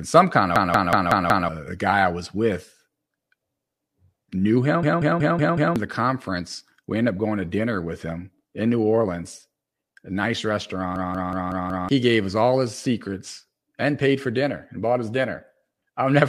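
At 0.56 to 1.49 s, 4.83 to 5.76 s and 10.96 to 11.89 s the speech jams into a system hang loop. The machine stalls while the audio hardware keeps replaying its ring buffer, so one 186 ms slice repeats five times at about 5.4 Hz, a choppy machine-gun stutter rather than a buzz. That length fits an 8192-sample buffer, and each stall swallows roughly a second of real speech.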